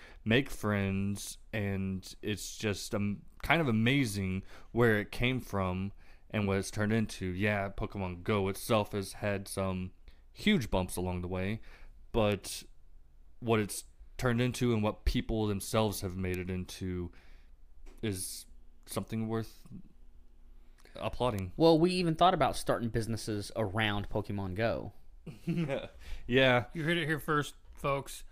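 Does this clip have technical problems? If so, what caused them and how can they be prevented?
Yes. Three bit error spikes occur, at 12.32 s, at 16.34 s between "what people themselves have" and "it into", and at 21.39 s. Each time a single stored or transmitted bit flipped, throwing one sample off by a power of two before it snapped back, reaching about -21 dBFS at the first and about -15 dBFS at the other two. Each one is heard as an isolated, broadband tick unrelated to the speech. Prevention: use error-checked links and ECC memory, and verify files with checksums after copying.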